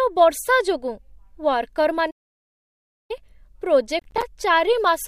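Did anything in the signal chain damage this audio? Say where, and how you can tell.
Yes. A playback stall at 2.10 to 3.11 s cuts the speech to silence for about 0.99 s, then it resumes, likely because the player starved or its thread blocked.

Processor overload crackle at 3.99 to 4.23 s, at the driver or buffer stage: around ten hard-edged dropouts, each about 10 ms, from audio buffers that missed their deadlines.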